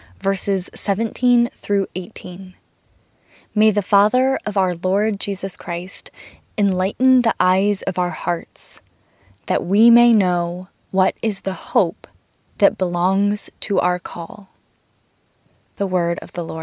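Speech recording with no technical faults to report.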